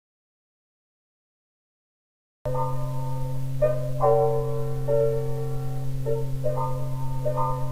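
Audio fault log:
0.00–2.46 s, audio dropout to silence: the clip opens in dead silence, with no room tone at all, and the sound enters abruptly mid-flow at 2.46 s; the input was likely lost, leaving silence written until the signal returned.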